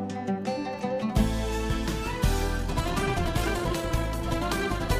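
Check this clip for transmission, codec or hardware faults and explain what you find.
One fault is audible: a time-stretched section running from 2.56 s to the end of the clip. From that point the pace jumps abruptly to about 1.85 times normal speed while the pitch holds steady. The cause is likely software compressing this stretch to fit a shorter length by dropping short pieces of the audio to preserve pitch, which makes the sound rushed. Because the pitch doesn't rise with the speed, this is not a simple playback-rate or resampling error.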